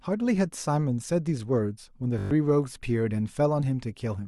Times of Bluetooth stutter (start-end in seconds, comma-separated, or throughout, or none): 2.19-2.31